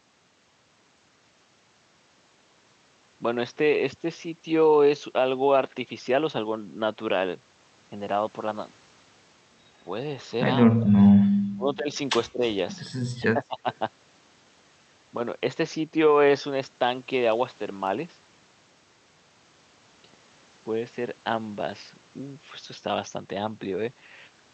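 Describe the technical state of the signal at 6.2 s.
At 6.2 s the signal is intact, with no audible fault at that point.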